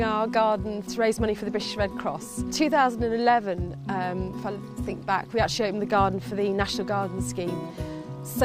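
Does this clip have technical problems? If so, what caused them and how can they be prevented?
No, nothing in this clip stood out as a technical problem on listening, so there is nothing here that calls for a cause or a fix.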